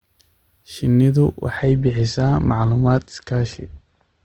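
A speech clip that switches to an adaptive stream at a lower bitrate from 1.56 s to the end: treble vanishes above 8.1 kHz and codec artefacts thicken, fitting a slowed connection forcing roughly a 64 to 16 kbit/s Opus step. Unlike packet loss, the change is sudden with no gap.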